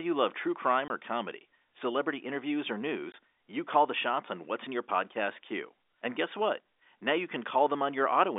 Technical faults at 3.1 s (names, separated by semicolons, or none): packet loss filled with silence